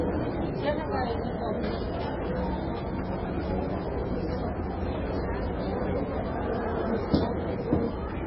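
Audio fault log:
Throughout, MP3 compression: the encoder was likely starved of bits, which fits a very low bitrate around 16 kbps. It discarded everything above 5.5 kHz and zeroed many weaker frequency lines, and with so little data per frame those lines flicker in and out. The sound is dull and band-limited, with a heavy watery, swirling texture, metallic chirping on bright or noisy parts, and transients that lose their edges and smear.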